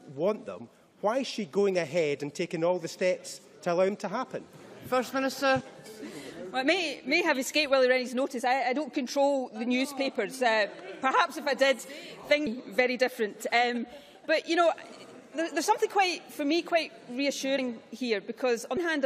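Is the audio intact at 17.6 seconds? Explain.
No. At 17.58 s, compressed frames are skipped: the decoder never outputs a short run of compressed audio, about two frames, so the sound jumps forward by roughly 70 ms. Unlike a dropout, there is no silent gap; the material on either side is butted together with time missing, which fits 32 ms codec frames. The join sounds either like a brief smeared blip, where overlapping lossy frames blend, or like a hard click where lossless frames meet.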